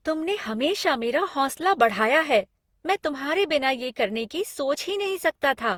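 Repeated lossy re-encoding, likely about seven passes through a codec that sounds like Opus at around 64 kbit/s, has left this speech clip with generation loss throughout. Stacked quantisation on shifting frame grids makes it swirly, smeared and hollow, with blurred attacks, though content still reaches 20.2 kHz.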